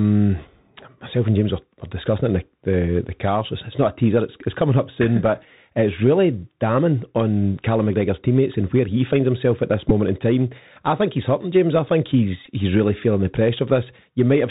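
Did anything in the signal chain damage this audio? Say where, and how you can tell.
Yes. Throughout, the speech is boxed into a narrow band with nothing above 4 kHz, a granular hiss underneath, and scratchy, distorted sibilants. That is the Bluetooth CVSD headset codec, consistent with a 64 kbps link. Its one-bit adaptive steps can't keep up with loud high-frequency detail.

At the radio link there are two short buzzy glitches from a Bluetooth headset packet repeated. One is at 9.89 s, after "finds himself at this". The other runs from 12.46 to 12.52 s, after "I think he's". Each marks about 11.2 ms of lost audio, which fits roughly three 3.75 ms packets that the chip filled by replaying the last good one.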